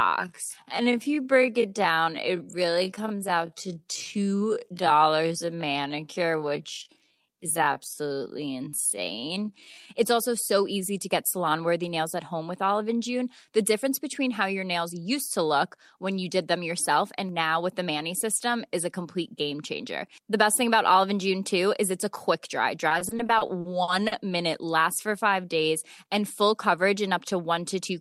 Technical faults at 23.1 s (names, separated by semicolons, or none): repeated stalls (stutter)